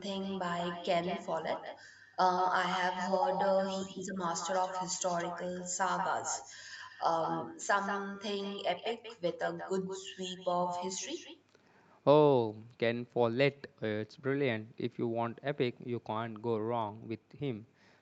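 From start to finish, every phrase is shadowed by an echo with no canceller: the far end's loudspeaker feeds its microphone, and the speech returns about a fifth of a second later, about 7 dB quieter. Unlike room reverberation, this is a distinct, repeated copy rather than a smeared tail.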